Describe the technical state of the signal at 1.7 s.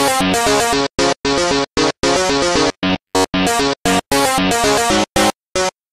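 Nothing is wrong with the signal at 1.7 s; the audio is intact at that moment.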